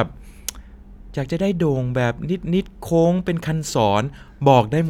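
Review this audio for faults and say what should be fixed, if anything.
No faults; nothing to fix.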